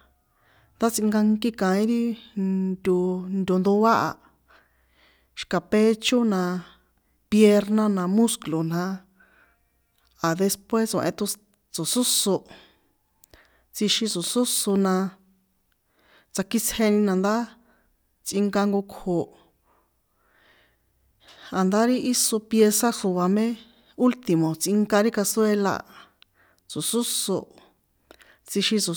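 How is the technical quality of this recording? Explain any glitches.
The recording has no technical glitches to explain. Nothing in the speech audio points to a fault at any point.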